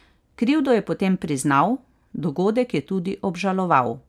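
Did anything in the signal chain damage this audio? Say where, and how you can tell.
No, no stage in the chain damaged this speech.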